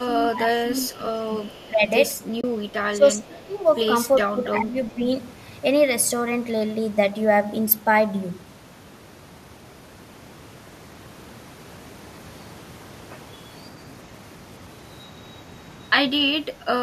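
From the start to 1.25 s, an echo canceller most likely misread both ends talking at once as its own loudspeaker echo and clamped down on everything. The result is speech suppressed in double talk: the level sinks by up to about 15 dB for roughly a second of that span, so the speech dips and fades in patches instead of holding steady.

At 0.94 to 0.99 s and again from 1.42 to 1.69 s, the far end's canceller likely failed to remove all of its loudspeaker pickup and sent some back. This echo leak is a faint copy of the speech trailing 383 ms behind the original, about 30 dB down. It is heard as a brief ghost and then a longer shadow.

From 1.68 to 1.89 s the same suppression returns for about 150 ms, again pulling the level down by up to about 15 dB.

Between 2.41 and 2.44 s, AAC frame loss with muting removes 30 ms, which fits three 10 ms frames of the low-delay AAC stream. The decoder zeroed the missing frames, and the overlapping windows blend the edges, leaving a soft-edged hole.

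The suppression comes back twice more. From 2.92 to 3.6 s and from 4.29 to 5.1 s, about half a second of each span is turned down by up to about 15 dB, so the speech thins and drops away in pieces before recovering.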